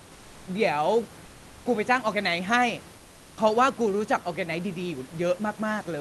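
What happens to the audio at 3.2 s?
From 2.97 to 3.37 s the room background gives way to comfort noise: a steady, featureless hiss about 4 dB quieter, likely from discontinuous transmission in the Opus DTX codec. Unlike a dropout, the sound never falls silent; its texture simply flattens.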